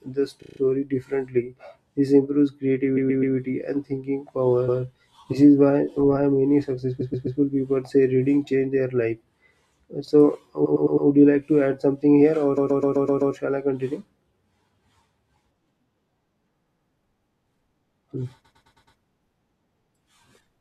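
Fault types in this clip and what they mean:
Repeated frames: the same 25 to 128 ms chunk of compressed audio plays again and again, so the speech stutters at eight spots, like right after "why many".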